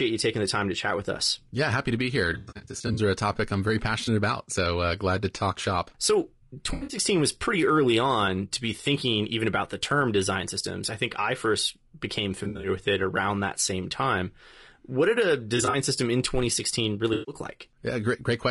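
Throughout, the speech sounds rough and grainy, with noise between harmonics, likely from low-delay AAC compression (AAC-ELD) at a bitrate around 32 kbps.

AAC frame loss with concealment produces smeared, noisy patches as the decoder fills gaps from earlier spectrum: at 2.33–2.99 s, the longest lasting about a tenth of a second, then 4.05, 6.73–6.97, 12.43–12.69, 15.57–15.75 and 17.13–17.35 s.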